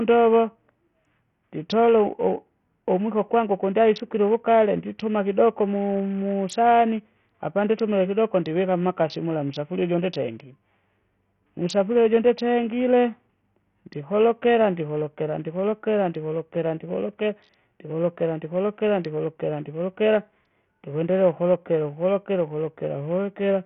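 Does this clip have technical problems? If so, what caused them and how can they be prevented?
Yes. Throughout the speech, the treble is cut off with nothing above 11.6 kHz, and what remains sounds gritty and grainy, with the upper register flickering in and out. This is likely Bluetooth SBC compression at a very starved setting, which fits a bitrate of roughly 48 kbps. The top sub-bands got no bits, and the lower ones were coarsely quantised. On a spectrogram, a hard ceiling at 11.6 kHz runs the full length, with patchy, blocky speckle below it. Sending the audio over a wired link or a higher-quality Bluetooth codec such as AAC or aptX, with SBC set to its maximum bitpool, would prevent this.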